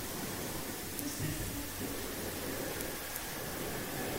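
Clock drift buffer slips, 1.14 to 3.24 s: clicks every 1.05 s, likely as mismatched device clocks force a few samples to be dropped or repeated.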